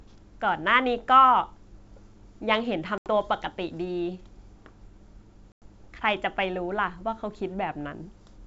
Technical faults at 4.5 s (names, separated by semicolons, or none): none